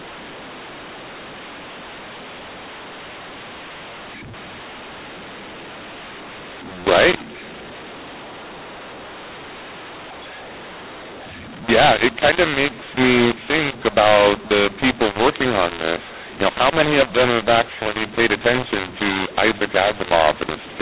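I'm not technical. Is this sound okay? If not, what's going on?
No. From start to finish the speech has a mu-law and A-law mix-up. It was packed up in the telephone system's mu-law format but unpacked as if it were A-law, a sister format with different rules. Loud and soft parts get scrambled, so the voice sounds harsh and gritty, and the pauses fill with hiss instead of going quiet. Unlike overloading, the grit is present even when speech is quiet. The telephone-quality narrowness itself is normal for this kind of line.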